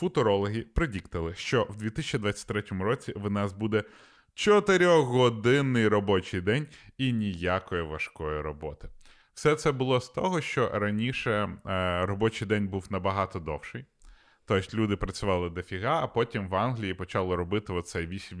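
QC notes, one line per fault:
No technical faults can be heard anywhere in the signal.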